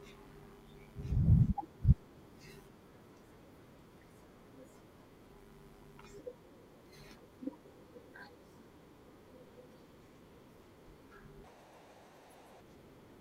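A speech clip with a section at the wrong speed near the end: from 11.44 to 12.61 s the voice runs about 1.86 times too fast, jumping up roughly ten semitones and sounding hurried and chipmunk-like. That's likely a playback or edit mismatched to the wrong clock.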